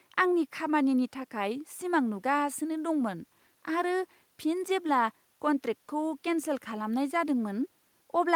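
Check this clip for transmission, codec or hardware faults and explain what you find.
Nothing to flag here; I listened through the whole speech recording and nothing wrong showed up at any point.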